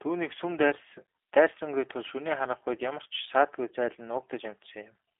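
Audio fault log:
Throughout, G.729 codec: the speech was rebuilt by a low-rate model-based voice coder, which fits 8 kbit/s G.729A. It sounds plainly rough and synthetic, held to a telephone band of 300 Hz to 3.5 kHz, with nothing above 3.7 kHz.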